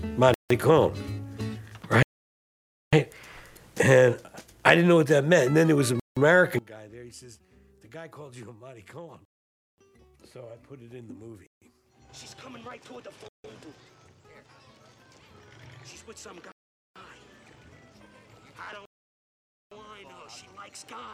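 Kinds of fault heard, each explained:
Bluetooth stall: eight silent gaps between 0.34 and 18.85 s, lasting 0.15 to 0.9 s, likely from the headphone buffer running dry while delayed packets were resent.
One channel inverted: from 6.59 s onward the sound drops by about 23 dB, likely because reversed polarity on one channel cancels the shared content.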